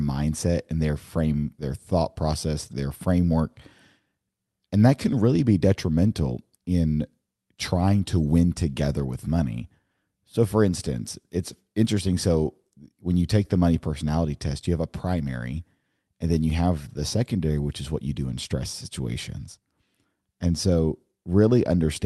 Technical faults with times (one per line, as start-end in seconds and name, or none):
none